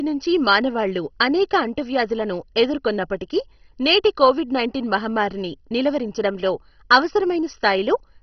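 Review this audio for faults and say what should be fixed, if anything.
Throughout the speech, nothing is heard above about 6.1 kHz, and the remaining sound has a gurgling, granular roughness. That points to heavy MP2 compression as the likely cause, at a bitrate around 32 kbps. MPEG Layer II divides the signal into 32 sub-bands, and when bits run short the upper bands are dropped while the rest are quantised coarsely. A plain low-pass filter would dull the top just as much but leave no grain. To prevent it, encode at a much higher bitrate or avoid MP2 in the chain.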